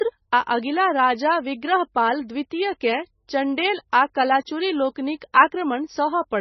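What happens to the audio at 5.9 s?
The speech sounds watery and swirly, dull with nothing above 5.9 kHz, as it does throughout: likely heavy MP3 compression at a very low bitrate, with the encoder cutting treble and dropping weak frequency lines.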